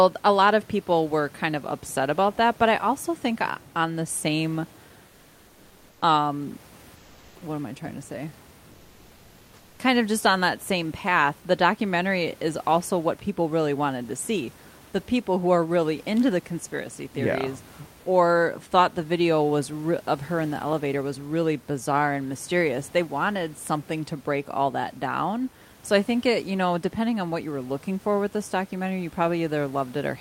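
From 6.95 to 7.41 s, just before "am I trying to", the room noise gives way to comfort noise in place of the background for about 460 ms: smoother hiss, about 3 dB quieter. That's likely a codec's discontinuous transmission, such as Opus DTX, filling a pause with synthetic noise.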